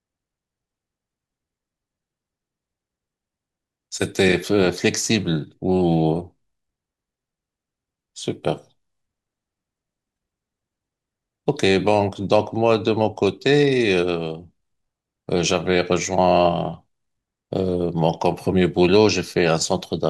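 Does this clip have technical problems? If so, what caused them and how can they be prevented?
Yes. Damaged data in a compressed stream causes a brief glitch in the speech from 10.14 to 10.17 s, where the decoder loses frame sync and resynchronises. Checksummed storage and error-checked transfer would prevent it.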